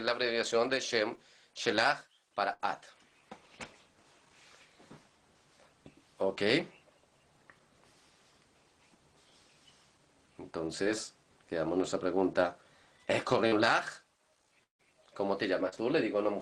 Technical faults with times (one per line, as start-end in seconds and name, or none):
1.15-1.19 short concealed packet loss
2.53-2.61 burst of packet loss
10.83-10.87 short concealed packet loss
13.47-13.54 short concealed packet loss
14.64-14.81 long network dropout
15.69-15.74 short concealed packet loss